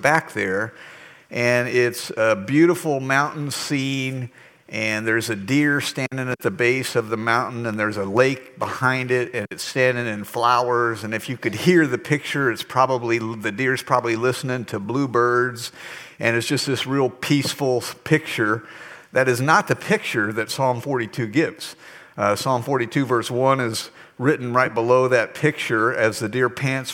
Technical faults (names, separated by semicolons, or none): hard clipping